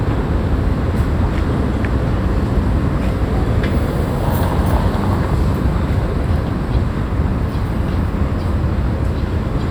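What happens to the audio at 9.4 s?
Nothing goes wrong at 9.4 s; the audio there is intact, with no dropout, click or distortion.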